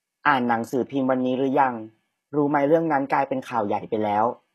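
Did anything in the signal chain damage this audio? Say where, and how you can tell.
Yes, at the codec stage, and it runs through the whole clip. The s sounds come out gritty and a bit lispy, the treble has a bright but synthetic sheen, and nothing sits above about 12.4 kHz. That points to HE-AAC compression as the likely cause, at a low bitrate that fits something around 16 kbps. The codec kept only the lower spectrum and patched the top back in by copying lower bands upward, so the upper harmonics of the speech don't line up with the real ones.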